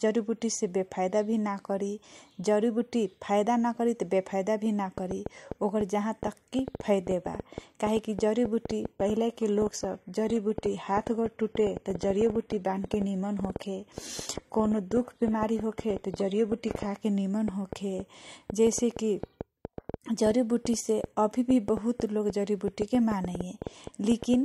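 From 4.98 s to 24.35 s a train of clicks runs over the speech and its pauses: about 5.5 similar pops per second at an uneven pace, around a hundred in all, peaking about 10 dB above the signal. Likely cause is nearby interference or a faulty connection or power supply. The waveform shows them as thin repeated spikes, the spectrogram as vertical broadband lines.

Between 8.98 s and 16.98 s the sound abruptly turns dull with no gap, an adaptive stream at a lower bitrate. Nothing survives above 14.9 kHz, which fits a drop from roughly 96 kbit/s AAC to a 20 kbit/s HE-AAC version. On a spectrogram the top band is cleanly sliced off for those eight seconds.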